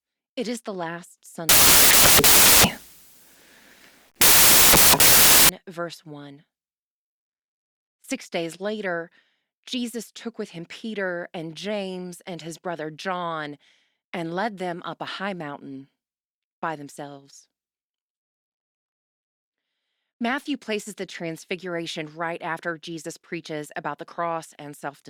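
From 1.49 to 5.49 s the reader assembles samples from the wrong bytes, misordering or misaligning each sample so the rapidly changing low bits land in the most significant position. The speech turns into loud, harsh broadband noise for those four seconds, close to white on the louder sounds.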